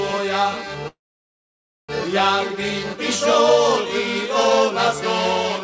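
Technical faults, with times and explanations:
0.88 to 1.91 s, call audio freeze: the sound holds on for a moment as a fading continuation of what came just before, then goes silent for about 0.93 s before picking up exactly where it stopped. Nothing gets skipped; a gap of roughly 1 s is inserted, so everything after it runs about a second late. That's likely packets stalling in transit and the jitter buffer running dry. The G.722 call path caps everything at 8 kHz.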